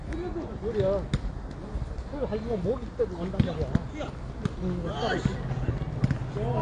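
Throughout, the sound is dull and smeared, with nothing above about 10.1 kHz and a fizzy, warbling texture, likely from AAC compression at a low bitrate around 32 kbps.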